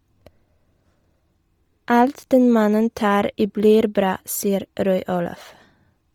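Speech affected throughout by heavy Bluetooth LC3 compression. The upper spectrum sounds emptied and refilled with noise, giving the voice a breathy, grainy edge, with smearing consistent with 10 ms transform frames. The damage fits a low rate near 32 kbps, likely an LE Audio link.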